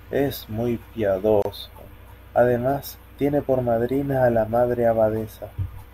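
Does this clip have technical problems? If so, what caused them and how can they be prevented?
Yes, there's a gap at a join of encoded pieces in this speech, from 1.42 to 1.45 s: a silence of about 29 ms opens mid-sound, with smeared edges, and the speech then picks up where it left off. It looks like the audio was encoded in separate chunks, likely about 6 s each, and stitched together without trimming the encoder's start-up silence or the padded final frame. Trimming that delay and padding at each join, or encoding the audio in one continuous pass, avoids it.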